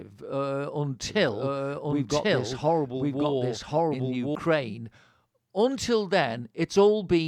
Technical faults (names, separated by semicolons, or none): doubled audio track